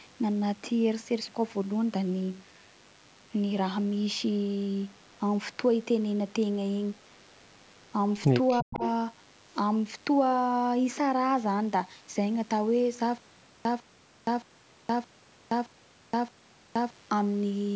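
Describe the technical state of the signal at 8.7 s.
At 8.7 s, three faults overlap. The first is a DECT cordless phone buzz, present through the whole clip. A nearby handset or base station sends a radio burst every 10 ms. The audio circuit rectifies it, which gives a steady 100 Hz buzz. It is thin and rich in harmonics, and it sits roughly 35 dB below the speech. At this moment it continues unchanged under the other two faults.

The second is an echo leak, from 8.48 to 8.89 s. A delayed copy of the voice played on the loudspeaker side comes back, about 349 ms late and around 15 dB below the main speech. It sounds like a quieter repeat trailing behind the talker. The likely cause is a loudspeaker on one side whose echo canceller failed to remove everything its microphone picked up. The leftover was sent back down the line.

The third is speech suppressed in double talk, from 8.61 to 8.82 s, right in the middle of the echo. 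The talker's level dips sharply, by as much as 40 dB at the deepest point. The affected stretch totals around 200 ms. The voice partly drops out. This is likely the echo canceller reacting to both sides talking at once. It could not tell its own talker from the loudspeaker echo, so it turned both down.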